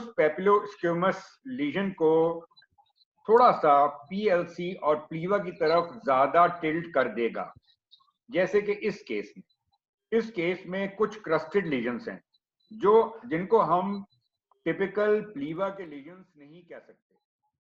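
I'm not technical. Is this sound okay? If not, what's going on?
No. From 15.3 to 16.31 s the volume drops a long way, but in small jumps, about fifteen a second, instead of gliding down. Each jump clicks, making a ticking, zipping sound. This is zipper noise.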